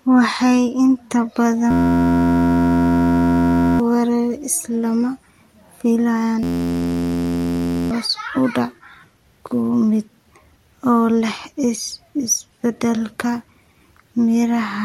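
From 1.71 to 3.80 s, and again from 6.43 to 7.91 s just before "u dhac", a system hang loop replaces the speech with a steady 86 Hz buzz. A frozen driver left the hardware recycling one 11.6 ms slice, which fits a 512-sample buffer, and about two seconds, then one and a half, are lost. The exact, pitched repetition sets it apart from a dropout's silence or a slower machine-gun stutter.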